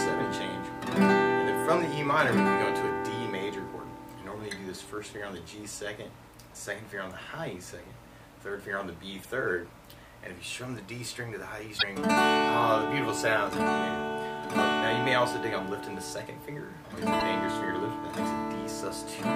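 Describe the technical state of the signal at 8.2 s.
At 8.2 s the signal is intact, with no audible technical fault at that point.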